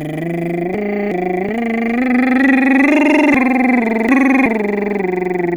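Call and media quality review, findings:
Chunks out of order, 0.74–1.49 s: music jumbles briefly at the hard joins. One 0.37 s chunk plays one position late, after its successor. Probable jitter-buffer or reassembly fault writing a late chunk without reordering.

Chunks out of order, 3.34–4.46 s: longer scramble. A 0.37 s chunk lands two positions late, giving three abrupt joins. Nothing is dropped, only the sequence is wrong. Same component suspected.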